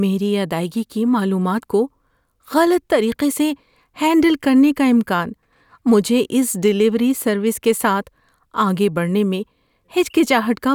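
No technical faults are audible.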